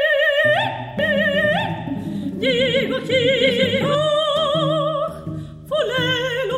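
A doubled audio track runs from 0.99 to 3.95 s: a second, full-band copy trails the original by about a second at roughly equal loudness, with no decay or room colour, and cuts in and out abruptly, most likely from a slower second capture path.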